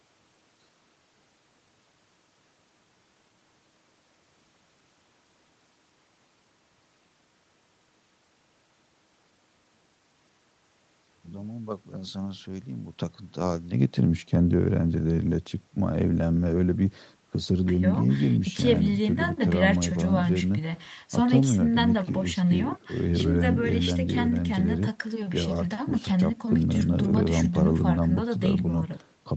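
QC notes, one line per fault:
No faults, one line: the speech passes through call microphone processing and a WebRTC call path with nothing heard above about 8 kHz.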